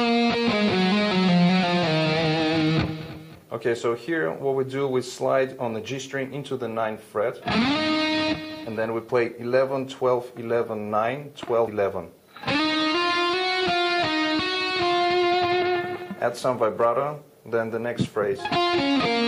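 Whole compressed frames were skipped at 11.67 s (about four 26.1 ms frames, roughly 100 ms) and 15.61 s (about two, roughly 50 ms), so the audio jumps ahead with a brief smeared blip.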